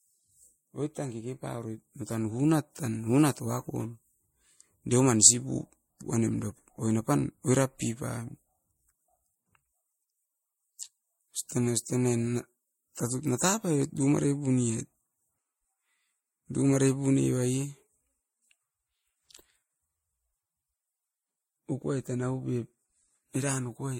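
From start to finish, the speech carries two layers of compression artefacts at once, likely from transcoding between lossy codecs: an MP3 stage followed by Vorbis, with a character that fits modest bitrates around 64 and 49 kbit/s. The artefacts of both codecs are heard together. On a spectrogram, nothing appears above 16.6 kHz, leaving a flat ceiling across the whole clip.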